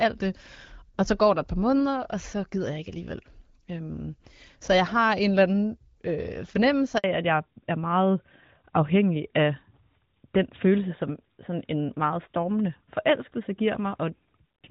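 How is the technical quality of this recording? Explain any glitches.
The recording has two linked faults in the middle of the call. Both happen at the same moment, right after "eller anden øh fornemmelse".

The first is a handover gap from 6.98 to 7.04 s. The phone switched the call to a different network. No speech frames arrived during that switch. The sound fades within a few tens of milliseconds and stays silent for 60 ms. Whatever was said in that window is gone.

The second is a fallback to narrowband, from 7.04 s to the end. Before this point the call carries HD Voice. Its clean, wideband character fits AMR-WB at around 12.65 kbit/s, with only light coding damage. After the handover the new link uses an older narrowband codec. The sound points to AMR-NB at about 12.2 kbit/s. Nothing above 4 kHz survives. Sibilants lose their edge, and the speech turns duller and rougher, like an ordinary phone line.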